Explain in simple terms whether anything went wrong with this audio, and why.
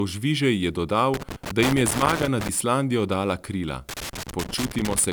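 Loose connector crackle appears from 1.14 to 2.49 s and again from 3.89 s to the end. A worn or dirty plug contact kept connecting and disconnecting as it shifted, chopping the speech into bits, heard as irregular scratchy crackling.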